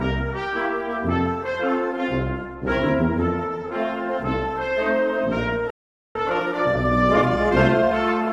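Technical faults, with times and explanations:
5.70 to 6.15 s, playback stall: the sound cuts off mid-flow and goes silent for about 450 ms. The player most likely ran out of buffered data or was blocked. The waveform shows a flat gap, and the spectrogram a blank vertical band across all frequencies.
6.15 to 7.93 s, time-compressed catch-up: after the gap, the audio runs 1.25 times fast at unchanged pitch while the player works off its backlog. Short segments are dropped and cross-faded. The spectrogram shows squeezed events with normal harmonic spacing.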